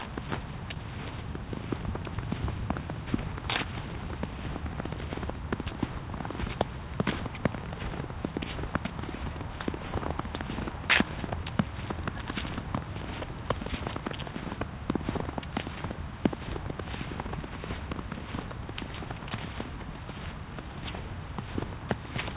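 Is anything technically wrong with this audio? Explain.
Yes. From 0.74 to 0.77 s there is a short concealed packet loss. About 20 ms of audio missed the decoder, so the receiver extended the preceding sound, from its pitch or as shaped noise, then blended back. It sounds like a brief smear. A waveform shows a repeated or smoothed patch, and a spectrogram shows a blurred column there. The whole clip also stops at 4 kHz, which fits a narrowband call codec such as G.711.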